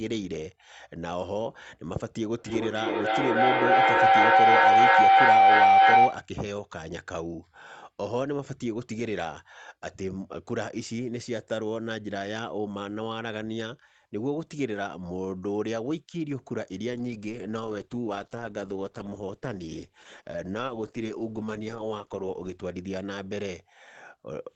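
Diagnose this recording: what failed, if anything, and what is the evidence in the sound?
Feedback howl through a second device in the room: the acoustic loop gained level each pass, so a tone near 700 Hz swells from 2.38 to 6.29 s, repeating roughly every 300 ms, to about 13 dB above the speech.

Call bitrate drop at the network and codec: the bandwidth estimate collapsed, and Opus fell from 32 to 10 kbps at 16.89 s. The speech sounds coarsely coded and rough until 22.81 s.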